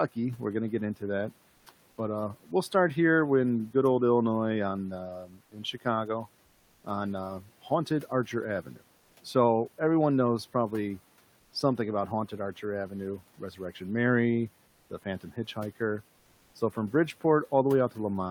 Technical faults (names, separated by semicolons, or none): speech cut by the noise suppressor; comfort noise in place of the background